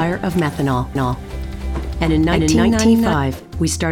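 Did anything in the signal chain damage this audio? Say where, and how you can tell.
Yes: a doubled audio track from 0.95 to 3.13 s, a dry full-band copy about 300 ms late at similar level, likely a slower second capture path.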